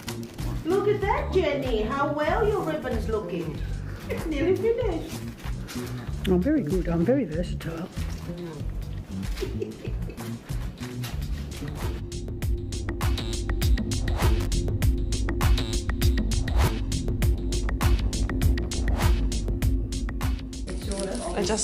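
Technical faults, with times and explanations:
14.40 to 14.47 s, loose connector crackle: a brief, ragged burst of scratching and crackle lasting about 70 ms cuts across the sound, with the signal stuttering in and out rather than simply getting noisier. A worn or dirty contact in the signal path is shifting, so the connection rapidly makes and breaks. Each break chops the audio, and any DC riding on the line jumps at those moments, producing the clicks and pops that make up the crackle.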